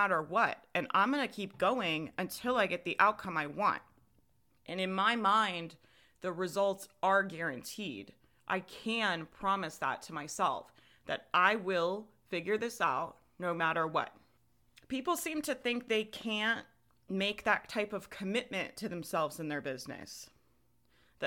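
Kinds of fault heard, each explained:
No faults can be heard anywhere in this speech.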